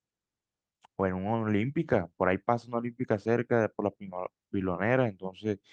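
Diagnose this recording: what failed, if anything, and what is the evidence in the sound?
No stage of the recording chain shows a failure here, and the speech signal stays steady and continuous throughout.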